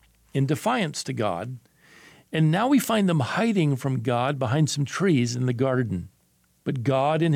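No technical faults can be heard anywhere in the clip. There is nothing to report in time order.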